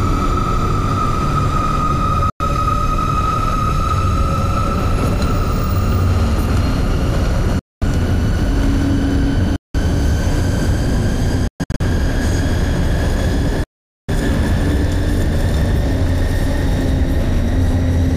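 The audio drops to silence at 2.30 s for 0.1 s, 7.59 s for 0.22 s, 9.56 s for 0.18 s, 11.48 s in broken gaps across 0.33 s, and 13.64 s for 0.45 s. Each time it resumes further along, as though it had kept playing. These are likely Bluetooth dropouts: packets reached the headphones too late and were discarded.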